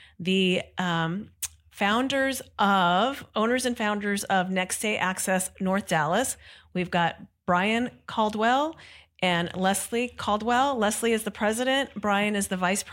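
No technical faults are audible.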